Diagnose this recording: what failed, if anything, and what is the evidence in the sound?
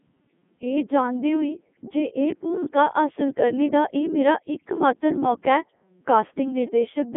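Codec stage: the Codec 2 vocoder resynthesises the speech from sine waves, so it sounds buzzy and robotic throughout, which fits the 3.2 kbit/s mode. A spectrogram shows neat harmonic stacks confined to 200 Hz–3.5 kHz.

Network stage: bit errors on digital voice radio at 2.66–2.75 s corrupt the frame parameters, a couple of percent of bits, producing a warbling pitch-and-level jump. The waveform's envelope lurches, consistent with about three frames hit.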